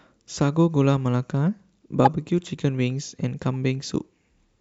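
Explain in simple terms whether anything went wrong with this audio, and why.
One thing went wrong: a corrupt frame decoded. In compressed speech, the sound is packed into short chunks called frames. Here a few bits inside one frame got scrambled, and the decoder played that frame anyway instead of hiding it. With misread instructions, it put sound energy at the wrong pitches for that frame's length. You hear it as a brief chirp or blip in the speech from about 2.05 to 2.07 seconds, and it is quite loud.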